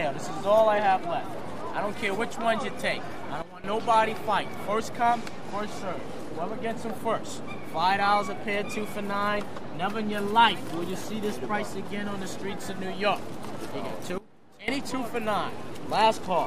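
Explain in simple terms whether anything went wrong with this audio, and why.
Twice the whole signal abruptly drops in level: from 3.42 to 3.64 s, and more steeply from 14.18 to 14.68 s. The sound and background noise fall together. These are sudden gain jumps, likely a volume change applied instantly instead of being smoothly faded.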